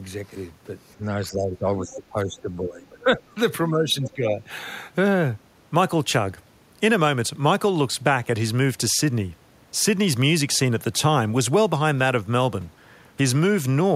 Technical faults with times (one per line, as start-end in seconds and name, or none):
0.96-3.37 speech suppressed in double talk
1.88-1.95 other side's voice leaking through
3.69-4.42 speech suppressed in double talk